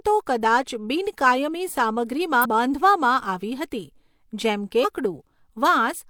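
Damaged data in a compressed stream breaks into this speech clip twice, at 2.41 to 2.46 s and again at 4.80 to 4.85 s, each time as a brief disruption lasting about 50 ms. At both points part of the encoded data has been corrupted, so the decoder misreads or rejects those frames, loses its place in the stream and hunts for the next valid frame header before playback resumes.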